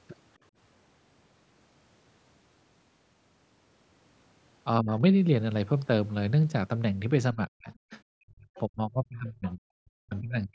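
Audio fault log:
4.8 to 4.91 s, 7.33 to 7.68 s, 8.17 to 8.5 s and 8.68 s to the end: speech suppressed in double talk. The speech level sinks abruptly, by about 25 dB in the first brief dip and by around 40 dB in the later ones. The final stretch stays mostly swallowed until the clip ends. The likely cause is an echo canceller that could not separate the local talker from the far side's loudspeaker sound and turned everything down together.
7.72 to 7.97 s, 8.55 to 8.6 s and 9.48 to 9.54 s: other side's voice leaking through. Faint, short scraps of a second voice slip in, roughly 25 dB below the main speech, mostly inside or between the suppressed gaps. The echo canceller likely failed to remove all of the loudspeaker playback picked up by the microphone, so leftover fragments pass through. The call's normal microphone processing leaves nothing above 8 kHz.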